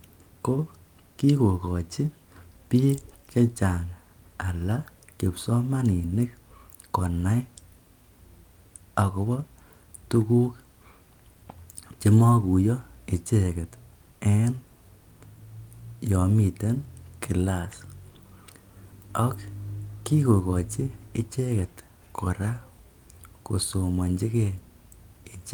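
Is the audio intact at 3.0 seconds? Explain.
Yes, at 3.0 seconds the speech plays through cleanly, with no dropout, click, distortion or other fault to be heard at that point.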